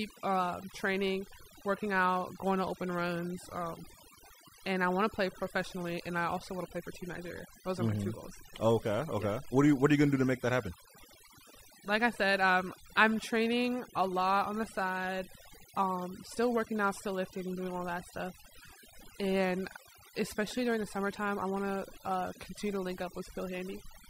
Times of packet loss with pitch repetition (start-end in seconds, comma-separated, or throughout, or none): none